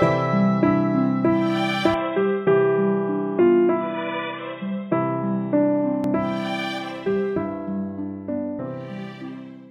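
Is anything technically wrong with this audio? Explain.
Yes. From 1.94 to 6.04 s the sound narrows abruptly to nothing above 3.8 kHz, drops about 5 dB and gains a new background noise. This is likely an input switched to a poorer device, with no gap at either switch. A filter alone wouldn't also change level and noise floor.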